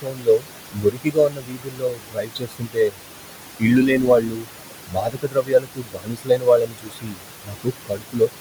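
Noise suppressor artifacts run through the whole speech clip. The room noise sits only about 11 dB below the speech. The suppressor pulls it down by about 21 dB, band by band and frame by frame. So the background drops away in the gaps and comes back up under the talking.

Speech cut by the noise suppressor starts right at 0.01 s and lasts to 0.47 s. It returns from 0.73 to 3.0 s, from 3.6 to 4.48 s, from 4.87 to 7.26 s, and from 7.45 to 8.3 s. In each stretch the suppressor mistakes quiet parts of the speech for noise. It turns them down by as much as about 22 dB. Soft consonants and word endings sound swallowed or faint. Several seconds of the speech are affected in total.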